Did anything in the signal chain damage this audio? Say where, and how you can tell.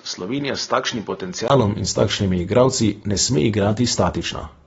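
Yes. The opening stretch, from 0.0 to 1.5 s, sounds duller and a little quieter than what follows. Nothing reaches above 6.7 kHz there, a faint new noise floor sits well under the speech, and a 20 ms gap marks the change at 1.5 s. At the device or driver stage, this is likely an input switched to a poorer device.

Throughout, the speech is dulled and smeared, with a warbling, fizzy texture on sibilants and nothing above 7.6 kHz. At the codec stage, this plainly audible damage is likely AAC compression, consistent with AAC-LC at a low bitrate around 24 kbps that trims the top band and thins the spectrum.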